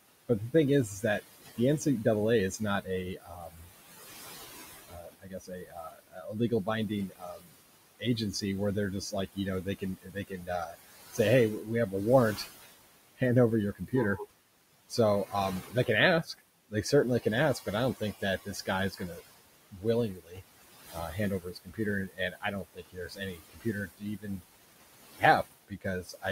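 A speech recording with overdone noise removal throughout: the background drops to near silence with twinkling specks, and a spectrogram shows isolated bright dots scattered over black gaps. Noise suppressor artifacts also run through the whole clip. Room noise, sitting about 15 dB below the speech, is pushed down by about 19 dB between phrases and lets back in under them. On the waveform the floor visibly pumps, and on the spectrogram the residue flutters in broken patches. Speech cut by the noise suppressor appears in four stretches: 0.08–3.73 s, 4.88–8.43 s ending just before "where they're", 9.01–14.33 s starting just after "where they're", and 14.89–26.25 s. In these stretches soft consonants and word endings are swallowed, up to about 21 dB down. Roughly one, two, one and four seconds are affected respectively, seen as clipped-off tails on the waveform and missing high-frequency consonant energy on the spectrogram.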